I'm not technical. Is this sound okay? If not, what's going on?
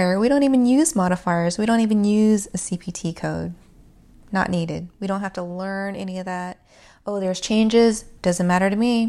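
No. Zipper noise occurs from 4.46 to 5.67 s, as the volume drops just before "any of that", and again from 7.15 to 7.57 s, as it rises back after it. The volume moves in small, unsmoothed jumps, about twenty a second, and each jump makes a tiny click, heard together as a fast ticking.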